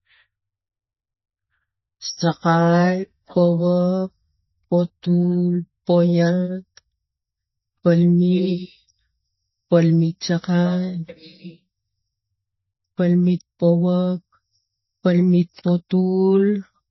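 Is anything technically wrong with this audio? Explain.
Yes. MP3 compression damage is plainly audible throughout the speech: nothing remains above 5.8 kHz, and the sound has a watery, swirling texture. This is likely a very low bitrate, around 24 kbps, forcing the encoder to cut the treble and drop weak frequency lines that flicker between frames.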